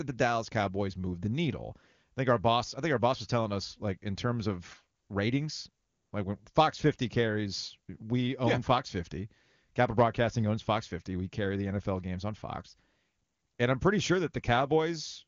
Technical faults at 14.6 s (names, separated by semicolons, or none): none